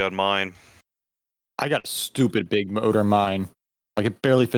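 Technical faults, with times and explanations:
1.79–1.86 s, short concealed packet loss: about 40 ms of speech between "I got" and "stupid big motor mine" never arrived, so the decoder stretched the preceding sound across the gap, heard as a brief smear. The spectrogram shows the preceding sound smeared flat across the gap; the waveform loses fresh detail.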